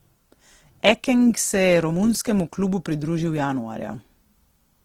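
From start to finish the speech sounds grainy and rough, with a noisy sheen where finer detail should be. That's likely Opus compression at a low rate, something near 16 kbps, where the music mode keeps full bandwidth but fills starved bands with noise.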